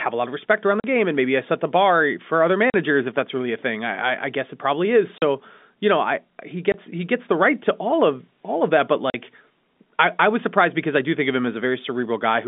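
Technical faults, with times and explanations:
0.80–0.84, 2.70–2.74, 5.18–5.22, 6.72–6.74, 9.10–9.14 s: packet loss filled with silence. The speech drops out for 40 or 20 ms, fitting 20 ms packets, with hard edges.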